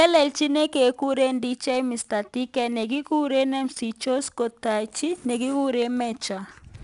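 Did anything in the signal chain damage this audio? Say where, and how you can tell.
Yes. The damage happens at the codec stage: the speech went through 4-bit ADPCM compression for the whole clip. Each sample is coded as a coarse 4-bit step from a predicted value, so the error rides along with the signal as a gritty hiss on every louder syllable, with plainly audible roughness on sharp onsets where the step size lags behind. Nothing is present above 10.6 kHz, which fits a coder running near 89 kbps.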